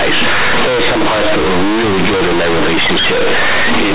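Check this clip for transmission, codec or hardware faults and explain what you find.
One fault runs through the whole clip: companded audio read as linear. The speech was stored as mu-law G.711, but the bytes are played as plain 8-bit linear samples with no expansion. Each sign change then swings the output across roughly half its range, so quiet passages come out as loud as peaks. The result is very loud, buzzy distortion with heavy noise filling the pauses. The underlying 8 kHz telephone coding itself works as expected.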